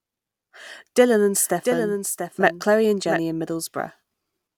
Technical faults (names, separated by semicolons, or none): doubled audio track